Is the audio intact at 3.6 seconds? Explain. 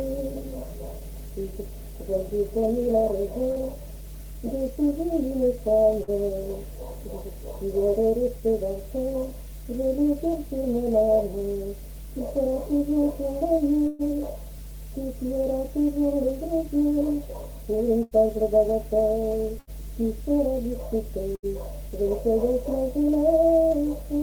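No, not quite. Right around there, from 3.51 to 3.61 s, there's a short concealed packet loss. About 40 ms of the stream didn't make it to the decoder in time, so the receiver patched roughly 44 ms by carrying the preceding sound forward, either following its pitch or as shaped noise, before easing back into the real signal. You hear it as a quick smear or wobble, and anything brief in that gap can drop out.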